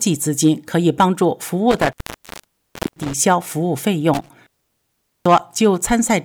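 An intermittent contact, a loose cable or plug briefly opening, cuts the sound with crackle from 1.71 to 3.18 s (about 1.04 s open) and 4.14 to 5.58 s (0.79 s), leaving faint hiss.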